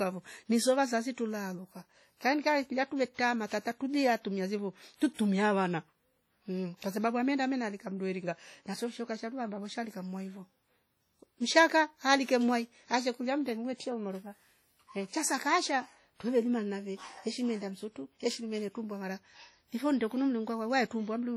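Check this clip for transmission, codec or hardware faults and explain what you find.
Two faults are present: heavy transform-codec damage across the whole speech clip, and two pre-echo events.

WMA compression: The encoder was likely WMA at a low bitrate, around 32 kbps judging by the damage. Coarse quantisation over long blocks leaves a ringing, washy texture with hiss that swells and fades with the speech. Weak spectral detail drops out, though content extends to about 20.1 kHz.

Pre-echo: Attacks land late in transform blocks, so quantisation noise sized for the loud onset also fills the quiet moment before it. At 3.14–3.19 s, right after "kaenkae gulia" and before "tata tubia tumia zevo", a short hiss leads the attack by about 43 ms. The same happens at 5.14–5.19 s, after "tata tubia tumia zevo", spreading about 51 ms. Both onsets sound smeared.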